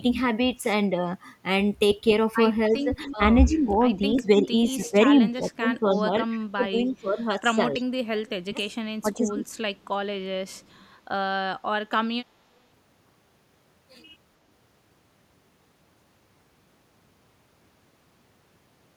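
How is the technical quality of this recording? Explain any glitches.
The recording has two call-processing faults in its first 11 seconds: the speech is repeatedly turned down, and a faint delayed copy of it leaks back.

Speech suppressed in double talk occurs at 2.7–3.83 s, 4.15–7.82 s and 8.43–9.38 s. The likely cause is an echo canceller that could not tell the near talker from loudspeaker echo while both sides spoke, so it ducked everything. The speech dips by about 5, then 15, then 30 dB.

Echo leak occurs at 2.72–3.16, 5.75–6.01, 7.74–7.81, 9.54–9.85 and 10.48–10.83 s. Residual loudspeaker pickup likely slipped past the canceller and was returned, heard as a copy of the speech trailing by 297 ms. It starts about 15 dB below the speech and fades to about 40 dB below.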